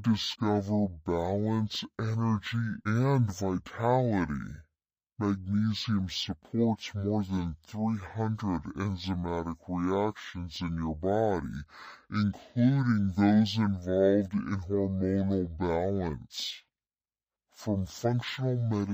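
Speech plays back at half speed and a full octave low from start to finish, the signature of stereo read as mono. The left and right samples of each frame have been taken as consecutive samples of one channel, so every frame of audio occupies twice as many sample periods as it should. That doubling halves the playback rate and drops the pitch by 12 semitones across the whole recording.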